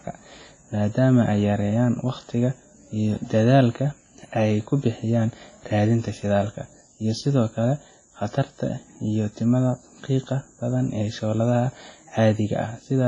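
From start to finish the speech carries heavy transform-codec damage, most likely WMA compression at a low bitrate around 24 kbps. Consonants ring and smear over tens of milliseconds, quiet detail turns washy, and a hiss swells and fades with the signal. Nothing survives above 10.6 kHz. On a spectrogram that shows as a flat ceiling at 10.6 kHz, with sparse, blocky patches below it where weaker components have been zeroed out.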